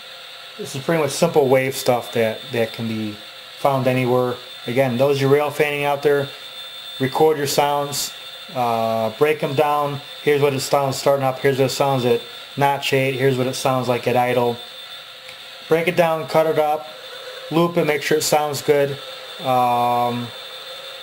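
No technical faults can be heard anywhere in this audio. Nothing stands out at any point in the recording that would call for a closer listen.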